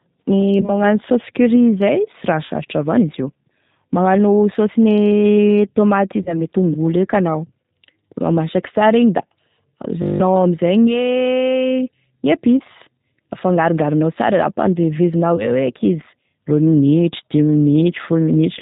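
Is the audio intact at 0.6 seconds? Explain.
No. At 0.6 seconds the speech is hit by VoIP packet loss concealed by the speech codec, from 0.61 to 0.82 s. About 20 ms of audio went missing, which points to a single lost packet. The decoder bridged the gap by repeating its last pitch and vocal tract filter at falling gain, so the speech smears into a buzzy tone or coloured noise that fades. Because each frame builds on the one before, the distortion lingers well past the gap itself.

This happens on top of G.729 coding that runs through the whole clip. It rebuilds speech from a filter, a pitch predictor and sparse pulses, in a way that fits 8 kbit/s. It removes everything above 4 kHz and leaves a plainly rough, synthetic texture.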